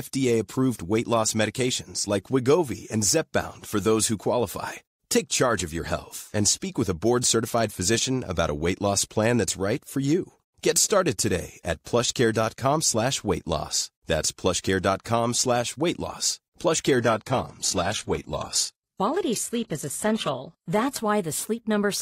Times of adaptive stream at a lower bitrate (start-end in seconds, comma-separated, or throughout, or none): 16.98-20.98